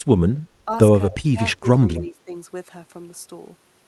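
The speech dips in level four times: 0.35–0.49 s by about 10 dB, 0.65–0.71 s slightly, 1.09–1.4 s by about 15 dB, and 1.59–2.34 s by about 10 dB. This is likely speech suppressed in double talk, with the echo canceller ducking this talker while the far side spoke.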